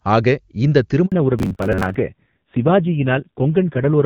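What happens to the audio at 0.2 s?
Nothing goes wrong at 0.2 s: the speech there comes through intact, carried by the AMR wideband (HD Voice) codec at 23.85 kbit/s with at most faint codec damage.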